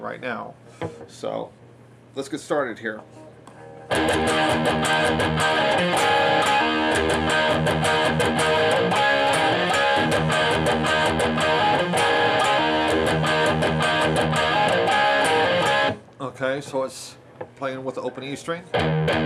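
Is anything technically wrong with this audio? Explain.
Yes. From 16.69 to 17.44 s a drift correction step detunes the audio: speed rises about 5.3% and pitch about 89 cents, then snaps back. A clock-matching resampler likely jumped its rate to rebalance a buffer. A spectrogram shows harmonics stepping upward, then dropping abruptly.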